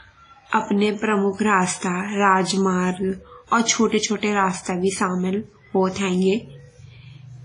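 From start to finish the speech carries heavy transform-codec damage, likely WMA compression at a low bitrate, with the degree of smearing consistent with roughly 24 kbps. Nothing is present above 10.1 kHz, so sibilants lose their top. Quantisation noise is spread over long blocks, smearing each onset into tens of milliseconds of ringing wash, and a hiss rises and falls with the level. Weak spectral detail has been zeroed, leaving the tone thin and watery.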